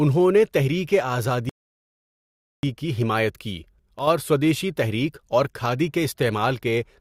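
At 1.49 s the speech cuts to silence and resumes exactly where it stopped at 2.63 s: a rebuffering stall, the player waiting for data and adding 1.14 s. From 3.99 to 4.07 s the level falls abruptly by about 6 dB, most likely one channel dropping out of the stereo pair before the mono sum.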